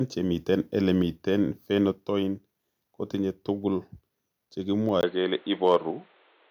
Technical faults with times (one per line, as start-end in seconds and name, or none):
5.66-5.76 microphone overload
5.91 microphone volume stepped down